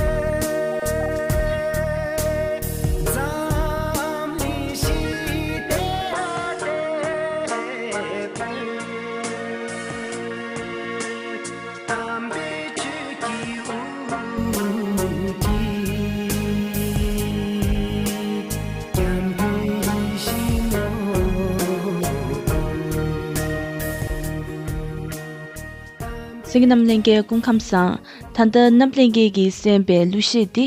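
At 6.13 s the sound abruptly goes duller and drops about 5 dB in level, with no gap at the changeover. Nothing comes through above 10.5 kHz, and a new, faint noise floor sits well under the signal. This is most likely an input switched to a poorer device, a narrower-band mic taking over mid-recording. At 14.38 s the original input returns and the top end and level come straight back.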